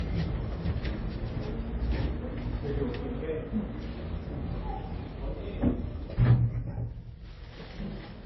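Transcoding between lossy codecs runs through the whole of this recording of everyday sound, from start to finish. Nothing is present above about 5.8 kHz, and the smeared, swirly texture of a very low-bitrate first encode sits under a second layer of different coding artefacts. This is likely an MP3 at roughly 23 kbit/s re-encoded to WMA at around 48 kbit/s. The higher second bitrate cannot restore the lost band, and it spends its bits preserving the earlier damage.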